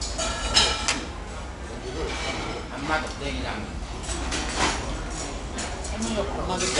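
Throughout, 4-bit ADPCM compression leaves a gritty hiss that rises and falls with loudness, unlike steady noise, and nothing above 10.6 kHz, which fits a 22 kHz sample rate.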